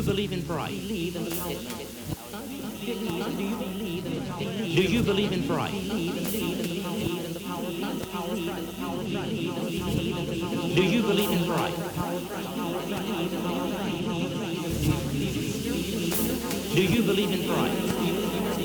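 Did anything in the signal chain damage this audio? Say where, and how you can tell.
No damage from the chain.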